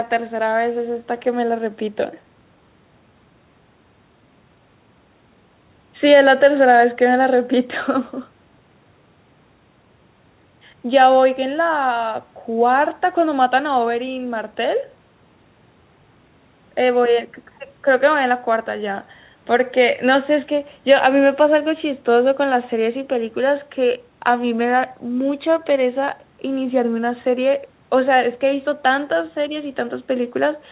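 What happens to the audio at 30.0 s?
Nothing goes wrong at 30.0 s: the speech carries on intact through the call path, which keeps it band-limited to 4 kHz as a G.711 mu-law link at 64 kbps would.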